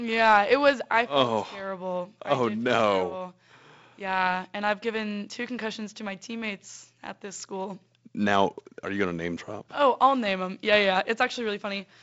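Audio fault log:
No faults are audible in this speech clip. The G.722 wideband telephone coding is working as intended, with nothing above 7.7 kHz and a light coding grain that fits its lowest 48 kbit/s mode.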